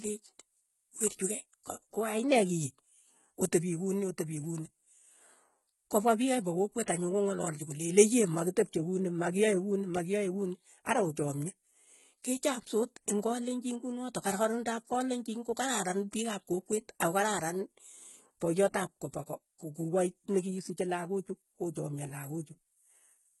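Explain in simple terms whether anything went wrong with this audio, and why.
The s sounds and other hissy parts of the speech come across gritty and metallic, almost lisped, from start to finish, and nothing is heard above about 11.8 kHz. This is likely heavy HE-AAC compression. To save space, that codec stores only the lower part of the sound and fakes the treble by copying lower bands upward. The rebuilt top end doesn't match the real voice, which causes that harsh, artificial edge.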